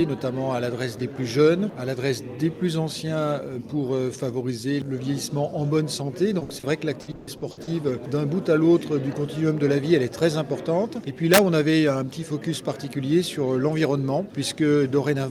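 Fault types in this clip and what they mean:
Short concealed packet loss: Packets arrived too late for the decoder twice, around 6.39 s and 6.59 s, and the receiver covered each hole by extending the preceding sound before blending back into the real signal. The first patch fills 20 ms and the second 40 ms. Each is heard as a brief smear or wobble, and the audio beneath those instants is simply gone, replaced by a continuation of what came just before.
Burst of packet loss: Immediately after the first short dropout, at 6.43 s, several consecutive packets failed to arrive, leaving a 60 ms run with nothing to decode. The receiver stretched the last sound across the hole and let it fade as the gap went on, producing a held buzz or sinking hiss. Playback then picks up again from later material, so that 60 ms stretch of the original is missing outright.
Repeated packet loss (robotic sound): Between about 7.01 s and 7.69 s, packets dropped out six separate times, the longest hole lasting 120 ms. 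Concealment kept patching each gap only for the next to arrive soon after, so roughly half of that span, 340 ms in total, is synthetic fill rather than real audio. The result is choppy, stuttering sound with pieces missing throughout.
Integer overflow: At 11.34 s a gain or summing stage pushed the signal about 3 dB beyond the largest value its integer format can hold. Rather than being capped there, the numbers wrapped around to the opposite extreme, so each peak that crossed the limit jumped across the full range. Over roughly 46 ms this is heard as harsh, violent cracking, far sharper and more jarring than ordinary clipping would sound.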